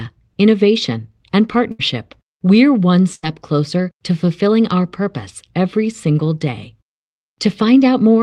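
A burst of packet loss at 1.71 to 1.81 s, and another at 3.15 to 3.25 s, each drops about 80 ms of the speech. Because the audio arrived too late or not at all, the receiver filled roughly 74 ms and then 79 ms by stretching the last sound it had and letting it fade. Each gap is heard as a brief held buzz or dying hiss before the talker jumps ahead.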